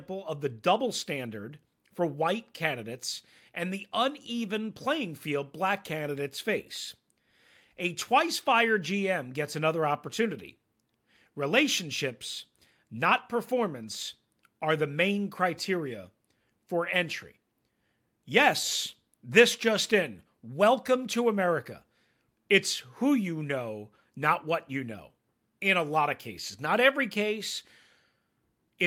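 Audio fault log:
No technical faults can be heard anywhere in the recording, and the signal stays steady and continuous from its first moment to its last.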